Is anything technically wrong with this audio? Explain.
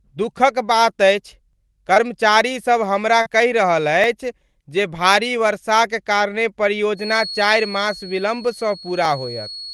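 Yes, there are three separate problems in this speech clip.

First, overlapping chunks. At 1.53, 4.04, 6.55 and 9.05 s there's a tiny stutter, exactly 2.5 s apart. That spacing tells you the audio was handled in 2.5-second blocks, and each new block starts slightly before the previous one finished, so about 7 ms gets played twice at every join. It's short enough to come across as a small click or hiccup, but the regular rhythm gives it away.

Second, short concealed packet loss, twice. Around 1.94 to 1.98 s roughly 20 ms of audio never arrived in time, and at 3.22 to 3.28 s it's a bigger hole, about 40 ms. In both spots the receiver patched the gap by extending the last bit of sound and then crossfading back into the real signal. You hear it as a brief smear or wobble, and a quick consonant sitting right there can get swallowed.

Third, a feedback whistle. From 6.93 s to the end there's a thin, steady tone at about 4.3 kHz, sitting around 15 dB under the speech and drifting a little in level. 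That's most likely a speaker-to-mic loop hovering right at the edge of feedback. One frequency keeps ringing on its own without ever blowing up into a full howl, so it hangs behind everything as a faint whistle.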